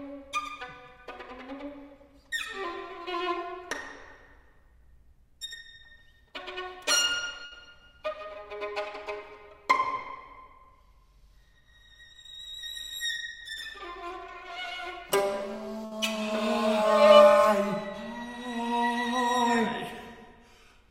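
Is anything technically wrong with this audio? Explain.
Yes: burst of packet loss at 7.45 s and 15.85 s. About 60 ms goes missing each time, bridged by the preceding sound held and fading rather than silent dropouts.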